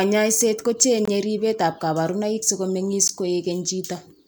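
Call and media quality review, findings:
Gap at a join of encoded pieces, 1.05–1.08 s: about 23 ms dropout in continuous speech, edges smeared by the codec. Probable component: encoder/segmenter. Separately encoded chunks concatenated untrimmed; start delay and last-frame padding retained.

Gap at a join of encoded pieces, 3.08 s: 16 ms gap, same smeared edges, speech resumes where it broke off. Spacing of 2.0 s points to fixed-length segment boundaries, each join carrying uncut codec priming and padding.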